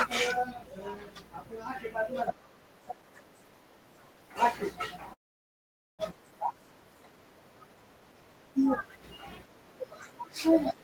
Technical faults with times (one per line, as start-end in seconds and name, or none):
5.13-6.01 call audio freeze